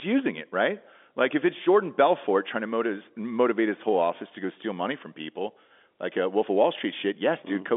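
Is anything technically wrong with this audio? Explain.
No, nothing stood out as technically wrong on listening to this speech.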